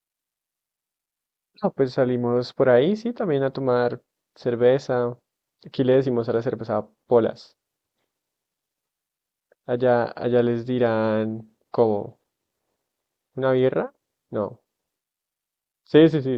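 No audible technical faults.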